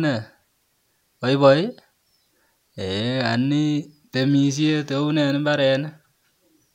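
Nothing goes wrong anywhere in this bit of speech, so there's no technical fault to point to at any moment.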